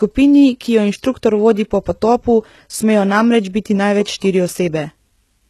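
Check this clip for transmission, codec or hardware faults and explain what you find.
There's one codec fault across the whole speech clip. Low-bitrate audio saved at a high bitrate: nothing above 12.3 kHz, likely a heavily squeezed source, fitting HE-AAC around 16 kbit/s, re-saved as generous MP3 that can't restore it.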